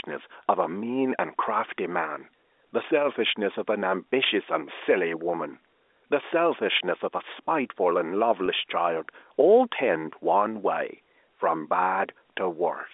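Speech over a telephone line shows one packet loss with pitch repetition at 8.46 to 8.48 s. About 20 ms of audio is missing, which fits a single lost packet. The receiver filled the gap by repeating the last pitch period, so the sound briefly holds with a slight buzz. The G.711 coding limits the band to roughly 300 Hz to 3.6 kHz.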